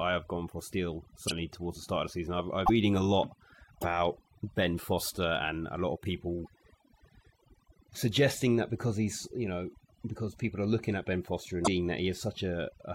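Across the whole speech clip, overdone noise removal leaves the background lowered and broken into twinkling specks. Individual frequency bands close to the reducer's noise estimate are pulled down hard, taking quiet speech detail with them.

Short glitches of about 40 ms occur at 1.27 s, 2.65 s (after "of the season I've", before "a lot"), 3.80 s (after "a lot"), 6.44 s (after "and a lot of") and 11.64 s. The likely cause is a broken MP3 bit reservoir: missing 26.1 ms frames leave the next frames reading another frame's data, so the sound jumps ahead through a brief hole or burst.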